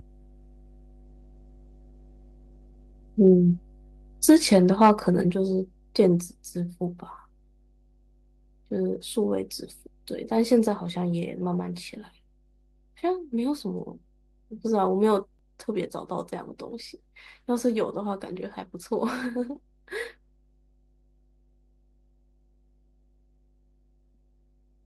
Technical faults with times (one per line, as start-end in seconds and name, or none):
0.00-24.85 mains hum
1.06-3.13 call bitrate drop
4.29-4.91 microphone overload
5.31 microphone volume stepped down